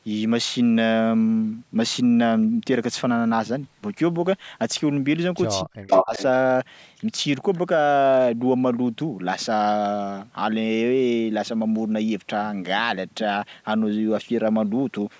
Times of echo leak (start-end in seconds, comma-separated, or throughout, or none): 5.89-6.23